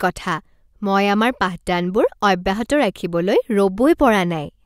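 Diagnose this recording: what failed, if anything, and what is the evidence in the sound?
Nothing failed here: I hear nothing wrong anywhere along the chain, so there's no stage to point at in this speech recording.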